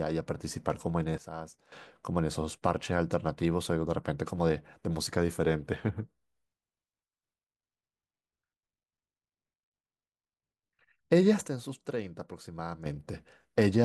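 A sudden gain jump hits this speech at 1.18 to 1.72 s (down about 12 dB) and 11.48 to 12.86 s (about 9 dB), likely from digital gain applied without a ramp.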